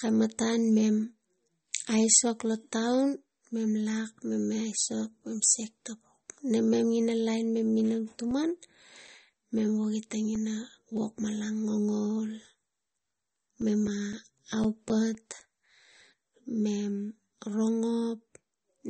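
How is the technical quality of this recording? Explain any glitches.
The recording has two audible problems: codec damage that runs through the whole clip, and two runs of regular ticking in the middle.

Throughout the speech there is a watery, swirling texture, and nothing is present above 8.4 kHz. This is likely MP3 compression at a low bitrate, around 32 kbps. When an encoder runs short of bits, it drops weaker frequency lines, and those lines flicker on and off from frame to frame. It also removes the treble above a fixed cut-off, which dulls the top end here.

From 7.8 to 10.61 s, just after "ina lain mem", there are CD scratch ticks: 12 short clicks at about four per second. A second run from 13.1 to 15.66 s has 11 ticks at the same rate. Each click comes from one revolution of a damaged disc area that error correction couldn't rebuild, so the player interpolated or muted the samples. 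The longest gaps last only a few milliseconds, about 4 ms in the first run and about 7 ms in the second.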